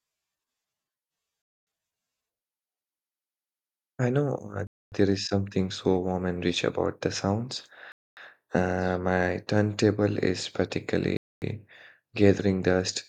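Gaps between chunks cut 250 ms silences into the speech at 1.42, 4.67, 7.92 and 11.17 s, one after every 3 s chunk, interrupting without losing sound.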